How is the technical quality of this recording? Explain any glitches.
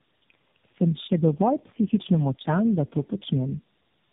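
Poor. Tandem speech coding runs throughout: about four speech codecs in a row, each recoding the last one's damage. Speech turns rough, warbly and muffled, with nothing above 3.8 kHz.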